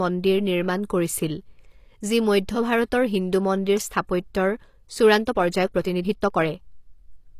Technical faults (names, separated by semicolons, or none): HE-AAC compression; time-stretched section